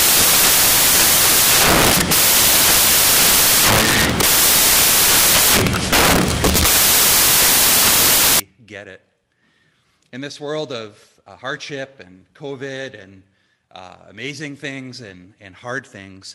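From the start to about 8.4 s, the samples are built from the wrong bytes: each value is assembled misaligned or byte-swapped, so the rapidly varying low-order bits land in the most significant position. The result is loud, harsh broadband noise, close to white. On a spectrogram the section shows as dense energy smeared evenly across all frequencies; the waveform is a thick, dense block with almost no visible envelope.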